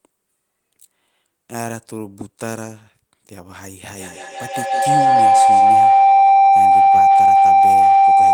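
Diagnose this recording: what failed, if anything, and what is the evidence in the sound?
An acoustic loop between two devices on the same call in one room has closed, with the call processing failing to break it: a feedback howl. From 3.95 s to the end at 8.33 s, each pass from loudspeaker back into microphone returns louder, so the repeats grow, pulsing about every 150 ms, and narrow onto a tone around 700 Hz. It swells to about 15 dB above the speech and never breaks before the clip ends.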